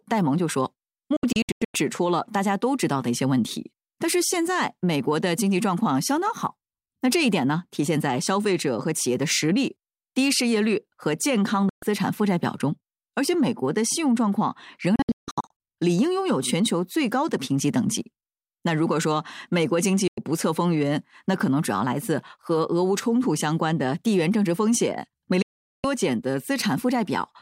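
Digital broadcast dropouts at 1.16, 11.69, 14.96, 20.08 and 25.42 s: the receiver mutes with a 3 ms fade whenever frames fail, leaving silences of 0.1 to 0.4 s. The first and third scatter into short gaps over about 0.6 s, and the missing speech never returns.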